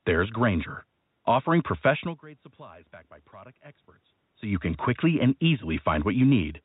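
No technical faults are present: the speech comes through the narrow telephone band of G.711 A-law coding with nothing above 4 kHz, over a bed of room noise, and the level changes around 2 s and 4.5 s are the talker moving relative to the microphone.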